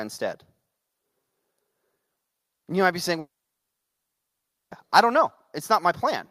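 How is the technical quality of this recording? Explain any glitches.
The recording has one serious glitch: a long break in the speech from 3.19 s to 4.74 s. Just after 3.19 s the last sound before the gap is drawn out into a brief buzz or hiss that fades away. About 1.43 s of silence follows, and the speech resumes with the missing 1.52 s simply gone. This is likely a long network dropout. No audio reached the receiver, so it could only extend the final sound for a moment before falling silent. A short packet-loss glitch is patched within tens of milliseconds, but this gap lasts well beyond that. A natural pause would pick up where the speech left off, whereas here the speech restarts partway along, with a stretch of it missing.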